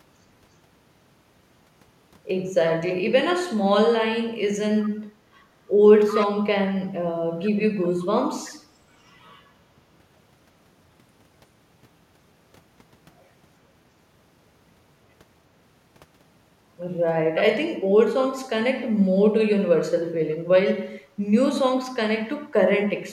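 Background gated by the echo canceller, 5.13 to 5.25 s: the room sound dips by about 9 dB for roughly a tenth of a second. While the loudspeaker played, the canceller clamped down on the microphone and then released it, so the ambience briefly sinks and returns.

Echo leak, 6.07 to 6.26 s and 7.83 to 8.05 s: a delayed copy of the speech, lagging 357 ms, comes back in short scraps. The first is fairly strong, around 10 dB below the speech, and the second is much fainter. This is likely residue that a speakerphone's echo canceller failed to remove and sent back down the line.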